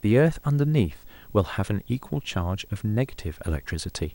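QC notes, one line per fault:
Throughout, video or display buzz: a screen or video cable couples in a 59.94 Hz field-rate buzz with hash, plus a 15.7 kHz line-rate whine, roughly 30 dB under the speech.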